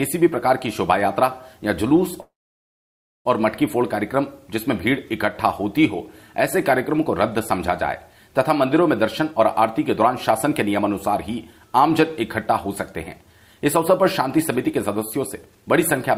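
At 2.21 s the sound stalls for about 1.04 s until 3.27 s, a call audio freeze. The last sound is briefly carried on, then about 0.95 s of that stretch is silent before playback resumes exactly where it stopped. That fits delayed packets likely leaving the jitter buffer empty. Unlike a dropout, nothing is lost. A pause is inserted, and everything after it arrives about a second later.

From 9.2 s to 10.81 s there is a jitter buffer speed-up. The audio plays at about 111% speed as the receiver trims roughly a fifth of a second in short pitch-period slices to reduce the built-up delay. A gentler pass follows from 13.17 s to 15.63 s at about 106%, removing around 150 ms. Both sound hurried, but the pitch stays put, which separates them from a sample-rate error that would also raise the pitch.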